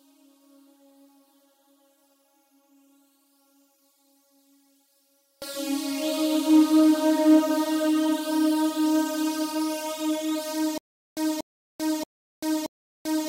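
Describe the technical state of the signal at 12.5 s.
At 12.5 s the signal is in a stutter with silent gaps, running from 10.78 s to the end. A 238 ms burst repeats four times, each followed by 390 ms of digital silence (628 ms cycle), likely a stalled stream replaying its last buffer, so the intervening audio is lost.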